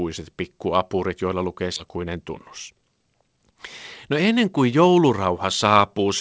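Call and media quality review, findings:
Skip ahead, 1.76–1.78 s: jitter buffer or network dropped roughly a second of queued speech with no concealment fill. Playback jumps straight forward, the two sides spliced almost directly, so around a second of speech is simply absent.

Jitter buffer speed-up, 1.85–3.52 s: buffer left holding excess delay, so the receiver repeatedly trimmed pitch-period-sized slices, roughly 200 ms in total. Speech runs at 114% speed with unchanged pitch and sounds hurried. Audio band ends at 8 kHz, consistent with a wideband call codec.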